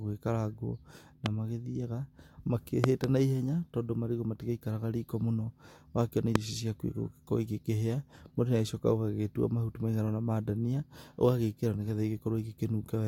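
At 1.26–1.28 s a loud pop cuts sharply over the speech, and between 2.84 and 3.06 s two more arrive in quick succession, just before "naihenya tondũ marigũ". Another follows at 6.35–6.38 s, right after "riko mũno ũgakĩona". Each is likely a sudden voltage step, such as a plug or switch transient, jumping well above the speech. On a waveform they appear as tall, narrow spikes; on a spectrogram, as thin vertical streaks spanning all frequencies.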